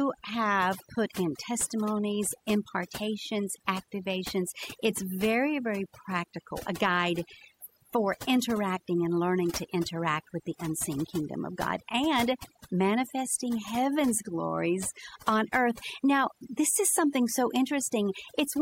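The clip is speech, and it suffers from overdone noise removal from start to finish. A noise reduction process was pushed too hard on a noisy recording. Each frequency band that sits near the tool's noise estimate gets pulled far down or shut off. Quieter parts of the speech fall below that line and vanish with the noise. The background sinks, then breaks into twinkling, warbling specks that come and go.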